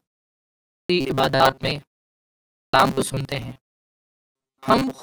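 At 0.45 s, speech resumes after a 0.45 s pause with its start cut off. This is a clipped start after a pause. The output device dozed in the silence and took about 0.45 s to wake. The onset is swallowed, and speech jumps in abruptly.

From 1.01 s to the end, the speech turns into a stiff metallic buzz near 134 Hz. This is robotic sound from repeated short buffers. The likely cause is audio arriving too late, with roughly half the time filled by repeated slices about 7.5 ms long.

The clipped start returns at 2.30 s after a 0.5 s pause, losing about 0.43 s. It happens again at 3.90 s after a 0.37 s pause, losing about 0.45 s. In both places the onset vanishes and the buzz continues over the rest.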